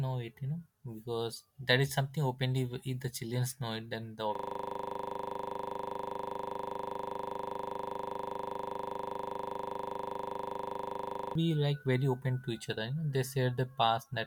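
A system hang loop runs from 4.35 s to 11.35 s of the speech. The computer or its audio driver stopped supplying new samples, but the sound hardware kept replaying the last stretch of its ring buffer. A 40 ms slice of audio repeats exactly, about 175 times, at 25 per second. The result is a rapid, rigid, mechanical rattle at 25 Hz, lasting about seven seconds before normal playback returns.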